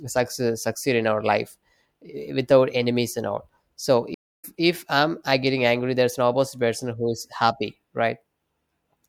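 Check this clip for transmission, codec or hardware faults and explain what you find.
One transmission fault is present, a stream reconnect. It runs from 4.14 to 4.45 s, just after "enemies and all so". The connection dropped and the player fell silent for about 0.29 s. It then reconnected and started a new decoder partway through the stream. The stream kept moving during the gap, so the speech resumes roughly 150 ms further on than where it stopped. The listener hears a clean hole and then a small jump into "if I'm I getting".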